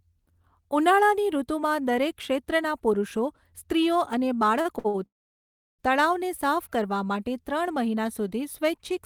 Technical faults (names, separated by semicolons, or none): short stall from a late packet; call audio freeze